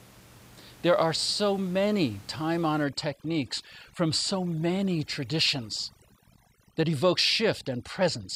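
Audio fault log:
2.84–8.35 s, overdone noise removal: after "are so many time", room noise (about 26 dB below the speech earlier) drops and breaks up into twinkling specks. An over-strong noise reducer is switching off bands near its noise estimate, removing quiet speech detail too.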